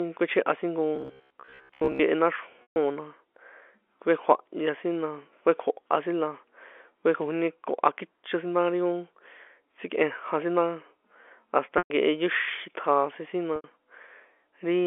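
Telephone-band speech, carried on a G.711-style line with nothing above 3.4 kHz, has robotic sound from repeated short buffers between 0.96 and 2.01 s: a rigid 66.7 Hz buzz, likely caused by 15 ms buffers being repeated for most of that stretch, appearing on a spectrogram as evenly spaced horizontal harmonics. Packet loss with pitch repetition occurs at 2.62–2.76 s (140 ms), 11.78–11.90 s (120 ms) and 13.56–13.64 s (80 ms). Each gap is bridged by a held, buzzy repeated cycle that fades away, seen in the waveform as identical periods tapering in level before the speech cross-fades back.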